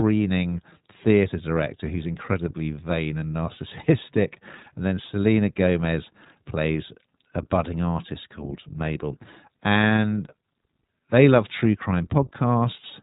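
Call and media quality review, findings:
iLBC codec, whole clip: band-limited, nothing above 4 kHz, speech clear but rough and slightly synthetic. Narrowband VoIP path, each frame coded standalone; 20 ms framing fits the 15.2 kbps mode. Damage plainly audible throughout.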